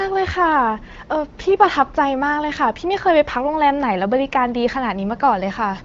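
Speech carried over the AMR wideband (HD Voice) codec at 15.85 kbit/s, with nothing above 7.5 kHz and only the light coding texture that rate brings; no faults present.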